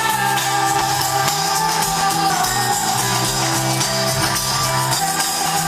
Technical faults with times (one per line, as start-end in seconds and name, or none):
0.81 compressed frames skipped
2.30 compressed frames skipped
4.99 compressed frames skipped
5.46 compressed frames skipped